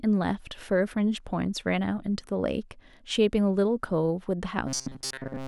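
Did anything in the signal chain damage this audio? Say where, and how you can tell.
Yes. From 4.67 to 5.47 s the speech becomes a rigid, metallic buzz fixed near 133 Hz. This is robotic sound from repeated short buffers, likely at the driver or buffer stage. Replaying a chunk of about 7.5 ms skips most real audio.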